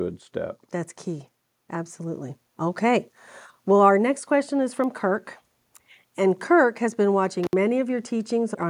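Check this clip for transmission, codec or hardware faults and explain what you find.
Two faults turn up, one gain-related and one hardware. From 1.04 to 3.12 s there's automatic gain rising: the AGC judged the input too quiet and pushed its gain up about 6 dB, so voice and background swell together. Then at 7.44 to 7.53 s, right after "has been", an intermittent contact drops the line for roughly 63 ms, with crackle at both edges and faint hiss in the gap.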